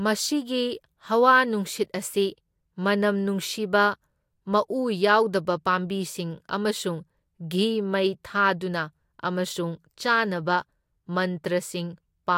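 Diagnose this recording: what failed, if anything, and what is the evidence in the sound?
No audible faults detected.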